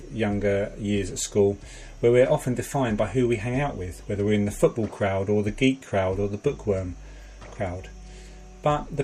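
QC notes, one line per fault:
6.16–9.03 s, resampler restarted on every block: a steady 100 Hz buzz rides on the sound, present only while signal is present. Each 10 ms block was converted in isolation, likely in a 44.1 to 48 kHz conversion, leaving a small error at every block edge that repeats at the block rate.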